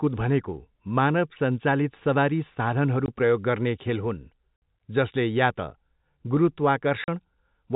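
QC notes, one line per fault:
3.06 s, 4.57 s and 7.04 s, packet loss filled with silence: the speech drops out completely for 20, 60 and 40 ms at hard edges. Those gaps are neat multiples of 20 ms, which fits 20 ms packets going missing, one, three and two in a row, and the receiver just played nothing in their place. The holes stand out against the G.711 telephone band, where nothing gets past 4 kHz.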